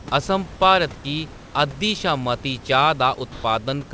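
From 3.32 to 3.44 s the speech briefly gives way to steady noise or near silence for about 120 ms, and roughly 70 ms of actual speech is lost before the voice returns. This is most likely sound dropped by the voice detector: the sender judged a quiet stretch to be background, stopped transmitting, and the receiver filled the gap with comfort noise until the detector triggered again. The call path itself carries nothing above 8 kHz, and room noise sits about 23 dB below the speech.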